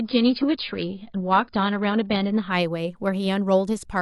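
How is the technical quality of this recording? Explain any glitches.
The recording has one glitch at the start. From 0.0 to 2.52 s, an adaptive stream starting at a low bitrate leaves the speech dull, with nothing above 5.1 kHz and coarse artefacts. The player then switches to a better stream and quality jumps without a gap. The change points to roughly 16 kbit/s AAC rising to 96 kbit/s.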